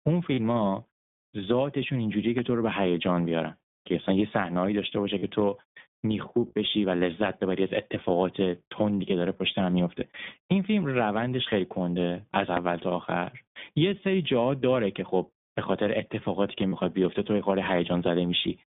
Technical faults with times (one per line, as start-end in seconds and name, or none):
0.00-18.72 iLBC codec
0.34-0.40 lost iLBC frames
2.38-2.42 loud pop
5.18-5.24 lost iLBC frames
12.57-12.60 loud pop
16.68-16.73 lost iLBC frames